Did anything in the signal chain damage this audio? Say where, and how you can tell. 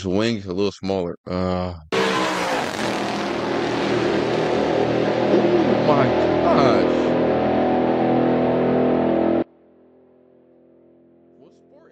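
Yes. At 9.43 s the path most likely lost its connection to the source, probably at a loose or failing analogue connection feeding an input that stayed live. This is an audio dropout to a faint residue. The sound cuts off abruptly rather than fading, and from there to the end only a faint residue remains, roughly 35 dB below its normal level. That residue shows the chain downstream kept running after the break.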